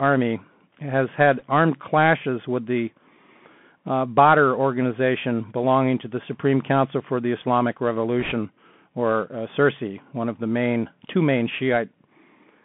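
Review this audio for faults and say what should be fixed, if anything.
Throughout, the audio has the sound of the Bluetooth CVSD headset codec. The band runs from about 150 Hz to 3.4 kHz, which fits CVSD at 64 kbps, where one bit per sample steps the waveform up or down with an adapting step. A plain low-pass filter would sound clean. Here a granular hiss sits underneath, and s sounds turn scratchy where steep, loud high content outruns the step. Recording over a wideband link such as mSBC or LC3, or with a wired microphone, prevents this.

Bit errors on a Bluetooth voice link appear at 1.39 to 1.43 s and 8.20 to 8.32 s, at an error rate of around 2 percent and then somewhat lower. Each flipped bit nudges the step by only a small amount, and the error then decays. That produces a brief rushing crackle rather than the dropouts or sharp clicks of lost packets. Keeping the headset close to the host and away from 2.4 GHz interference prevents these.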